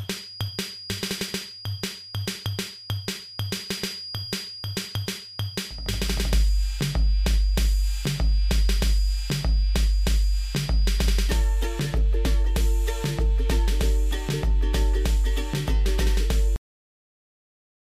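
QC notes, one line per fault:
0.00–11.39 s, feedback whistle: a thin, steady tone at 4.9 kHz sits behind the sound, roughly 20 dB below it, swelling and fading slowly in level and disappearing at 11.39 s. This is likely a loudspeaker-to-microphone loop held just at the edge of feedback. One frequency gets enough gain around the loop to keep ringing but not enough to grow into a howl, so it lingers as a fixed, narrow whistle instead of running away.
16.56 s, cut-off end: the audio stops abruptly in the middle of a sound and falls straight to digital silence, with no natural decay or tail, and stays silent for the remaining 1.3 s. The final stretch of audio was never written out or played, so the sound is truncated mid-event. Nothing fades, and the waveform ends at whatever level it had at the cut.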